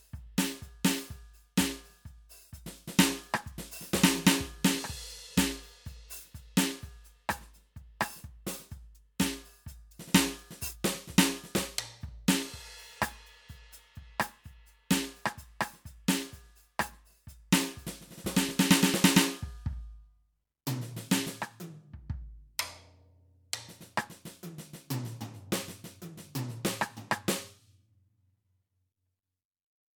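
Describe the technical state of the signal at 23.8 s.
At 23.8 s the music plays through intact, with no audible fault at that moment.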